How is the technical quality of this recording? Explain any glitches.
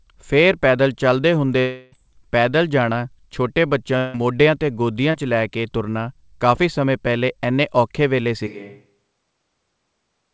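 The recording is speech carried over a call link, with nothing above 8 kHz, which fits a wideband G.722 codec. It has several audible glitches: two longer gaps papered over with synthetic sound, two brief smears, and a late change in microphone character.

Long network dropouts, at 1.60 to 1.94 s, just before "ਪੈਦਲ ਜਾਣਾ ਛੋਟੇ ਬੱਚਿਆਂ", and at 3.98 to 4.16 s, between "ਪੈਦਲ ਜਾਣਾ ਛੋਟੇ ਬੱਚਿਆਂ" and "ਮੋਢਿਆਂ 'ਤੇ ਗੋਦੀਆਂ 'ਚ". In each, the speech gives way to a buzzy, fading continuation of the preceding sound, about 0.32 s and 0.16 s long, with no dead silence. Then the speech resumes with that stretch simply missing. This is likely a run of lost packets that the receiver concealed by extrapolating the last audio.

Short concealed packet loss, at 5.12 to 5.16 s, and at 6.56 to 6.59 s, between "'ਚ ਲੈ ਕੇ ਤੁਰਨਾ" and "ਸਮੇਂ ਪਹਿਲੇ ਐਨੇ". Each is a quick smear or wobble lasting a few hundredths of a second. 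About 20 ms of audio failed to reach the decoder in time. The receiver bridged the hole by continuing the prior sound, either pitched or noise-like, and then cross-faded back into the real signal.

Switch to a distant microphone, from 8.49 s to the end. The voice abruptly turns roomier and hollower and loses bass. It drops about 5 dB in level, and background noise sits roughly 35 dB below the speech. This is likely the close microphone dropping out and a farther pickup, such as a camera's built-in microphone, taking over.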